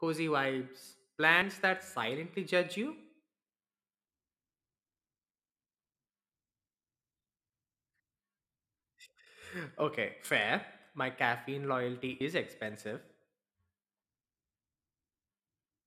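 At 1.41, 10.24 and 12.2 s, compressed frames are skipped. About two 26.1 ms frames drop out each time, roughly 50 ms. Each jump leaves a brief smeared blip.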